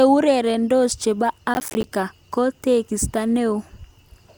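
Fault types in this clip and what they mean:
Processor overload crackle: missed roughly 10 ms buffer deadlines leave silent gaps, heard as gritty crackle from 1.54 to 1.87 s, just before "ko tekista".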